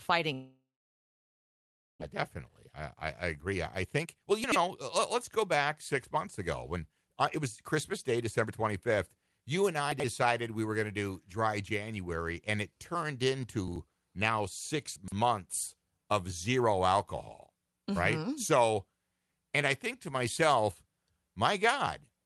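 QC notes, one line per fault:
0.33–2.04 s, long network dropout: the last sound smears into a fading buzz, then about 1.3 s of near silence, and the speech resumes with roughly a second missing. This is likely a stalled network, not a local glitch. Unlike a brief packet loss, there is no quick concealment, just a long hole.
2.39–2.95 s and 3.35–9.39 s, jitter buffer speed-up: the speech runs 8% and then 10% fast while the pitch stays put, removing about 50 ms and then about 0.7 s. The buffer is trimming repeated pitch-period slices to shed the built-up delay after the dropout. Unchanged pitch rules out resampling.
4.44–4.56 s, 9.92–10.04 s (just before "we were going"), 13.68–13.76 s (just after "and it turned"), 14.96–15.12 s, chunks out of order: 40 ms pieces play one to three chunks late, giving a jumbled instant with three hard joins. Nothing is missing, which separates this from loss or concealment.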